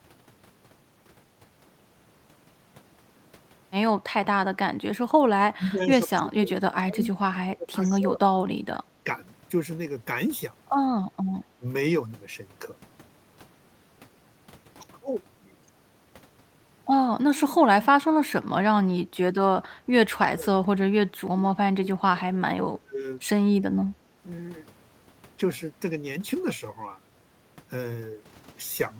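Speech suppressed in double talk at 5.53–8.39, 8.56–9.07, 11.57–11.65, 17.21–17.28, 19.86–19.90, 20.31–22.37 and 22.54–23.01 s. The voice dips or cuts out, by up to about 30 dB in the long stretches, likely because the echo canceller muted it while the far side spoke. On the waveform these show as sudden envelope troughs, and on the spectrogram as faded, thinned bands.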